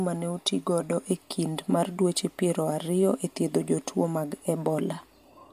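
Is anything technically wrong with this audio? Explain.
No, the signal shows no technical fault anywhere in this recording.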